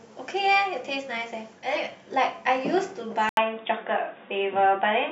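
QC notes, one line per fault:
3.29–5.12 s, input switched to a poorer device: after a silence of about 80 ms, the speech turns dull and boxy, with nothing above 3.8 kHz, a level shift of roughly 5 dB, and a new noise floor around 45 dB below the signal. The likely cause is the system moving its input to another microphone or a headset call profile mid-recording, whose narrower band, different gain and own self-noise replace the original path until the end.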